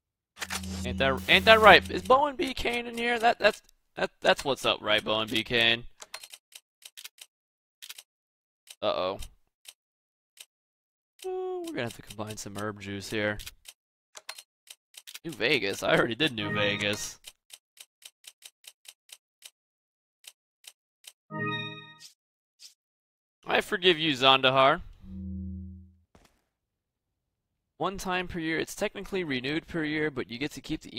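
From 1.17 to 1.77 s an unreliable data bit flips in random samples, adding equal spikes of about -34 dBFS, heard as a steady crackling fizz.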